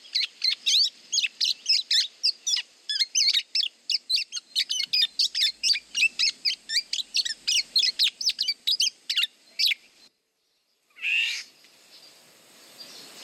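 DAB burbling appears in four bursts, at 2.56–3.35 s, 4.87–5.81 s, 7.65–8.64 s and 9.63–10.63 s, growing harsher as residual bit errors rise from a few tenths of a percent to about 0.7 percent. Corrupted MP2 samples put short noise blips in single sub-bands, and corrupted scale factors make individual sub-bands leap in level for up to a frame, giving a bubbling, squelchy chirping over the sound. A spectrogram shows scattered rectangular blocks flickering across frequency; the waveform shows jagged, frame-length bumps.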